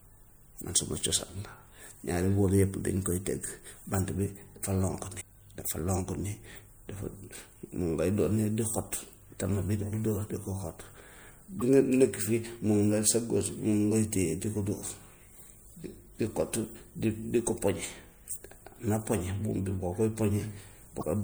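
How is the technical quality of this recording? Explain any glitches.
Three short glitches from damaged data in a compressed stream occur at 5.17–5.22 s, 11.58–11.62 s and 20.99–21.03 s. Corrupted bytes make the decoder misread frames, lose sync and hunt for the next header, leaving a brief disturbance of roughly 40 ms each.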